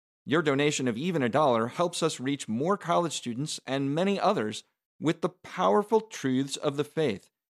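Nothing in this recording of speech stands out as a technical fault, so there's really nothing to flag here.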